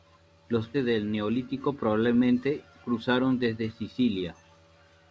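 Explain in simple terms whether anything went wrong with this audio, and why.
A skip ahead hits at about 0.74 s: roughly a second of speech was thrown away, and playback jumps straight to later speech with no gap between.

A jitter buffer speed-up follows from 0.86 to 2.47 s: the receiver trimmed tiny slices repeatedly, so speech runs about 10% faster at normal pitch, sounding hurried.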